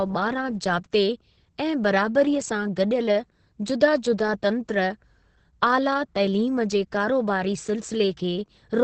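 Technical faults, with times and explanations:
Throughout, Opus voice compression. Nothing remains above 8.5 kHz, so the speech sounds muffled. The linear-prediction coder codes the excitation coarsely, leaving it hoarse and slightly robotic. The heavy damage fits wideband SILK coding at around 10 kbps.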